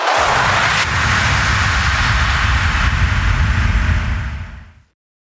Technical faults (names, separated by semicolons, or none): gain pumping